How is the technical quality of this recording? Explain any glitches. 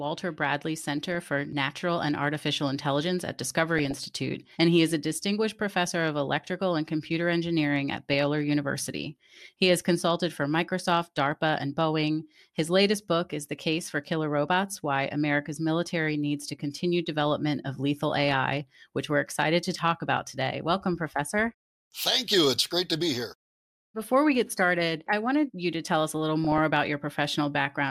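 The speech is hit by five short bursts of DAB burbling: 1.03 to 1.23 s, 3.79 to 4.09 s (just before "and he is a"), 8.10 to 8.26 s (right after "and computer engineering at"), 18.11 to 18.36 s (before "which we're excited to"), and 26.44 to 26.58 s. Weak reception let a fraction of a percent of bits slip past error correction into the MP2 data. Corrupted samples put short blips of noise into individual sub-bands, and corrupted scale factors make sub-bands leap in level.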